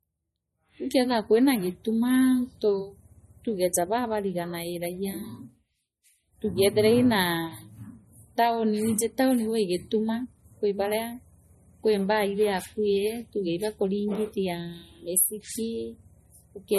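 From start to finish the speech sounds plainly watery and swirly, and nothing is heard above 13.2 kHz. The likely cause is MP3 compression: short of bits, the encoder cut the treble and let weak frequency lines flicker between frames, damage that fits a bitrate near 32 kbps.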